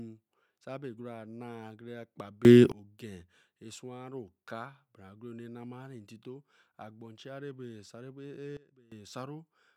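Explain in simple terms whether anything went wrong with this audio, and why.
At 2.45 to 2.72 s the speech and its background noise suddenly get much louder together, and at 8.57 to 8.92 s they drop much quieter. This is a sudden gain jump, likely a volume setting changed instantly rather than faded smoothly.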